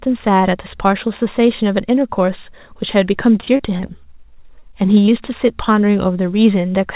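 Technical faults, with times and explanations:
3.40–3.91 s, repeated packet loss (robotic sound): The call path kept failing to deliver audio in time over this half second, leaving a string of gaps totalling about 80 ms, the longest about 26 ms. The receiver patched each one by extending the preceding speech, so about 27% of the stretch is synthetic fill. The quick alternation of real and extrapolated sound makes the speech choppy, with pieces audibly missing.
4.60–4.63 s, 4.95–4.98 s and 5.06–5.23 s, short concealed packet loss: Three separate 20 ms chunks of the stream never reached the decoder in time. The receiver bridged each hole by carrying the last sound forward, from its pitch where voiced and as shaped noise where not, for about 18 ms, 10 ms and 11 ms respectively, then cross-faded back into the real signal. Each comes through as a brief smear or wobble, and in the last a little extra time is added, slightly stretching the speech. 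All of this sits on top of the narrowband G.711 mu-law call path, with nothing above 4 kHz.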